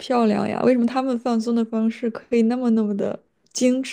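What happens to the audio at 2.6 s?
Crude rate conversion runs through the whole clip, including 2.6 s. The speech sounds converted, which points to 32 kHz to 48 kHz, by linear interpolation with no filtering. This leaves an inharmonic fizz roughly 40 dB down. Unlike steady hiss, it rises and falls with loud, bright syllables.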